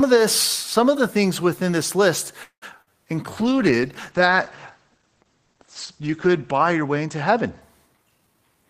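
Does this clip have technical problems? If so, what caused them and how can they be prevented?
Yes. Right after "things within this list", from 2.43 to 2.64 s, the sound stalls: the last sound carries on and fades, then about 100 ms of silence, and the speech resumes exactly where it stopped with nothing lost. This is a call audio freeze, likely caused by packets held up in transit so the jitter buffer ran dry. The receiver filled about 185 ms, adding that much delay. A steadier network path and an adaptive jitter buffer with some headroom would prevent it.

Shortly after, at 2.82 to 2.90 s, the last sound is briefly held and fades, and the speech jumps ahead, with about 40 ms of audio gone. This is a burst of packet loss: several consecutive packets never arrived in time, so the receiver concealed roughly 46 ms by extending and attenuating the previous sound, then continued past the missing stretch. 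Forward error correction or redundant encoding in the call would prevent it.

From 3.32 to 7.86 s the speech turns muffled and rough, losing its crisp highs. This is a call bitrate drop: the bandwidth estimate fell and the encoder went from 32 to 12 kbps, staying at the lowest rate for about 3 s. At that rate Opus coded more coarsely and narrowed the audio band from 20 kHz to 8 kHz. More available bandwidth, or a less aggressive congestion controller, would prevent it.

From 7.93 to 8.69 s the speech sounds hurried but keeps its pitch, running at about 119% speed. This is a jitter buffer speed-up: the buffer held more audio than its target, so the receiver repeatedly cut out short pitch-period slices, about 150 ms in total, to bring the delay back down. Avoiding the delay spikes that overfill the buffer would prevent it.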